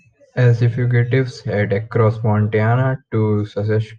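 Nothing stood out on listening to the speech here.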